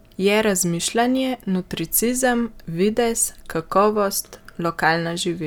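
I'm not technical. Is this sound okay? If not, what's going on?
Yes, there's nothing wrong to hear in this speech.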